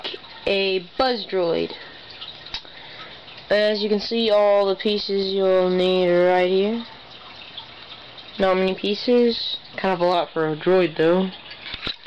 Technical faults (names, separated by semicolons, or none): wrong sample rate